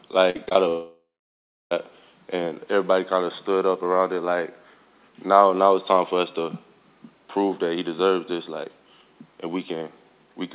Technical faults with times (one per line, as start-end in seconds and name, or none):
0.30-0.57 repeated packet loss (robotic sound)
0.69-1.73 long network dropout